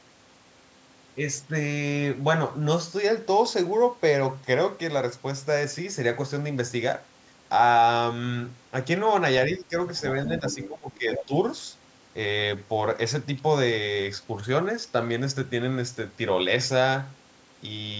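At 9.49 to 9.74 s and again from 10.28 to 11.32 s, the echo canceller likely faced double talk. It could not tell the local talker apart from loudspeaker echo, so it pulled everything down. The result is speech suppressed in double talk: the voice sinks by roughly 15 dB at its deepest and thins or drops in fragments. The first dip is brief, while the second adds up to well over half a second of clipped, receding speech.

Inside that second stretch, at 10.47 to 10.68 s and 11.12 to 11.25 s, the other side's voice leaks through. The canceller likely failed to fully subtract the far-end playback picked up by the microphone. A second voice surfaces in two short scraps, sitting around 10 dB below the main talker. Both scraps share the call's band limit, with nothing above 8 kHz.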